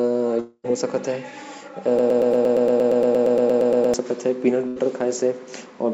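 From 0.40 to 0.67 s the speech breaks off in what is likely a long network dropout. The receiver extends the last sound as a decaying buzz or hiss for about 0.24 s, then about 50 ms of silence follows, and roughly 0.24 s of speech never returns.

Between 1.99 and 3.94 s a broken-record loop takes over. A 116 ms fragment repeats back to back 17 times, a stuttering mechanical pattern that likely comes from a stalled player or stream resending its last buffer. The speech due in that span is lost.

At 4.68 to 4.79 s a burst of packet loss leaves a gap. The receiver fills about 84 ms by holding and fading the last sound, and roughly 80 ms of speech is missing when the audio resumes further on. Throughout, the call-codec path shows no content above 8 kHz, consistent with G.722.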